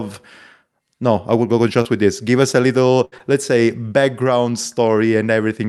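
At about 1.81 s, just before "with this", there's a short concealed packet loss. Around 40 ms of audio never arrived in time, and the receiver bridged the hole by extending the last bit of sound for roughly 34 ms before blending back into the real signal. You hear it as a quick smear or wobble leading into that phrase. The same thing happens again at about 3.18 s, just ahead of "let's say background": a smaller 20 ms hole, patched for about 20 ms, heard as a brief smear or wobble.

Between those two, at 3.05 to 3.14 s, after "us a", there's a burst of packet loss. Roughly 60 ms went missing in one go, and the concealment stretched the previous sound for about 70 ms, fading it down as it went. That comes across as a short held buzz or dying hiss, and then the audio jumps ahead into "let's say background" with the bit in between gone. The call codec itself, Opus at 64 kbps, rolls off the top end around 12 kHz.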